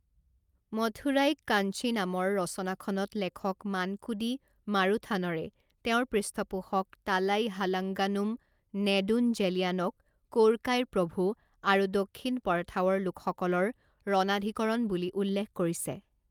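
Nothing in the speech stood out as a technical fault on listening.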